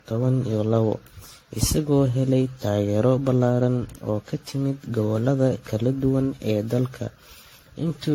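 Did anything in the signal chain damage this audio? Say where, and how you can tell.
Yes, at the codec stage, throughout the speech: it sounds swirly and hollow, with smeared attacks. It's worse than one pass of the 64 kbit/s AAC-LC it suggests, likely generation loss from about ten re-encodes on shifting frame grids. A spectrogram shows speckled holes below a hard 16.6 kHz ceiling.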